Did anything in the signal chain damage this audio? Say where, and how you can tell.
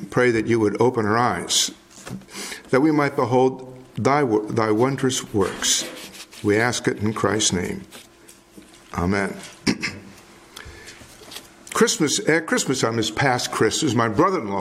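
No, nothing in the signal chain shows any audible damage at any stage.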